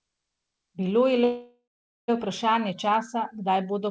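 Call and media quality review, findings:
Audio stalls at 1.24 s, resumes at 2.10 s. The last sound is held as a fading buzz or hiss, then about 0.45 s of silence before playback continues exactly where it stopped. Nothing is dropped; about 0.84 s is inserted, so the stream now runs later. Call audio freeze, likely a packet delay that emptied the jitter buffer. Band limit near 8 kHz fits a G.722 call path at 64 kbps.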